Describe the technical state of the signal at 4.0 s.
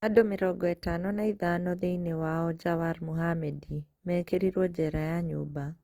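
At 4.0 s the speech sounds grainy, rough and noisy across the full band, as throughout, likely from Opus compression whose music mode fills starved bands with noise, fitting roughly 24 kbps.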